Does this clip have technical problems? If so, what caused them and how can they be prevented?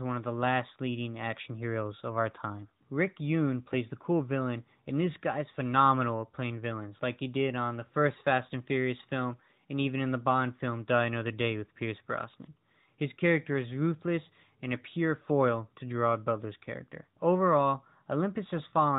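No, this speech recording has no technical faults, so there is nothing to trace or prevent.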